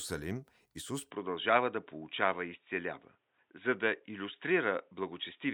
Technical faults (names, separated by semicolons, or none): input switched to a poorer device